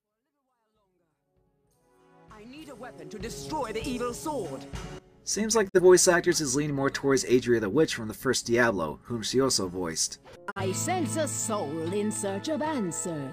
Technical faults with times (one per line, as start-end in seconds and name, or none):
5.68-5.80 digital broadcast dropout
10.50-10.60 digital broadcast dropout